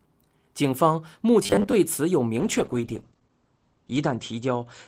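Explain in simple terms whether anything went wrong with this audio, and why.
Two things go wrong. From 1.43 to 1.74 s the speech turns into a stiff, metallic buzz at a steady 100 Hz that only loosely follows what is said. This is robotic sound from repeated short buffers: the cause is likely new audio arriving too late, so the playback software kept replaying a tiny slice of about 10 ms to fill the gap, while about half of the real audio was skipped. The fixed pitch of the buzz separates it from ordinary choppiness, which produces gaps or stutters rather than a steady tone.

From 2.4 s to the end of the clip there is a call bitrate drop. The connection's estimate of how much data it could carry fell, so the encoder compressed the speech much more heavily. The sound becomes rough and watery, and it loses its brightness because everything above about 8 kHz is cut, where before it reached about 20 kHz. 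The worst stretch lasts about 1.4 s. Unlike the buzz, the pitch stays natural and only the clarity suffers.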